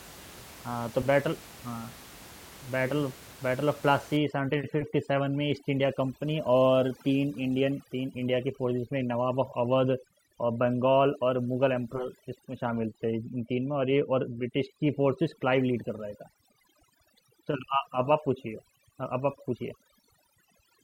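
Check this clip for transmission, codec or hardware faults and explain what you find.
One fault is present: overdone noise removal. It runs from 4.17 s to the end of the clip. A noise reduction stage is set far too aggressively. It pulls individual frequency bands down or out whenever they sit near its noise estimate. Quiet parts of the speech fall below that threshold and vanish with the noise. The room noise, about 21 dB below the speech, drops and breaks up into twinkling specks.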